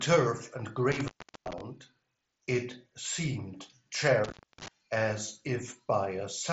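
From 0.92 to 1.61 s and again from 4.24 to 4.68 s, an intermittent contact in the cable or plug breaks the speech for about 376 ms and then about 318 ms. Each gap sits between crackly edges and leaves faint hiss. On a waveform the dropouts appear as near-flat stretches with spiky borders, and on a spectrogram as dark bands bracketed by broadband clicks, below the 7.7 kHz ceiling of the mSBC headset link.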